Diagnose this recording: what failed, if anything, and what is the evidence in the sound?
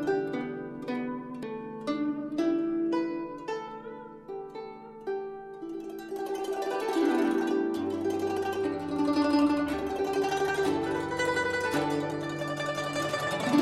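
Six brief smeared blips, each a small forward jump in the sound, land at 1.42, 3.67, 8.36, 10.27, 12.10 and 13.26 s. The jumps range from about 20 ms to about 200 ms, the one at 8.36 s being the largest, and each fits a whole number of 23.2 ms frames. This is compressed frames skipped at the codec or storage stage. Frames missing from the file, or rejected by the decoder as damaged, were never played, and the overlap between neighbouring frames softens each join into a blur rather than a click.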